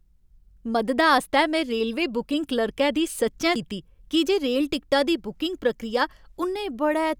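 At 3.55 s a CD skip occurs: the laser loses its track and lands on a different turn of the disc's spiral. The player mutes for a few milliseconds, then resumes from the new position, so the speech ticks and jumps abruptly into "कीती की जे रेल".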